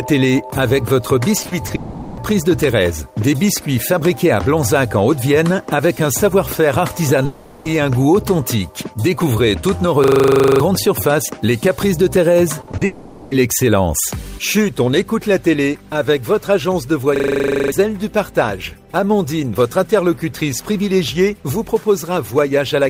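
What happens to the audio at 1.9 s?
At 1.9 s the clip sits inside a long network dropout running from 1.75 to 2.19 s, most likely caused by a stretch of audio packets that never reached the receiver. With nothing arriving, the receiver covers the gap itself for about 420 ms, stretching the last sound it had into a buzzy, hissy tail that fades rather than dropping to silence. When the signal returns at 2.19 s, the lost material is simply gone.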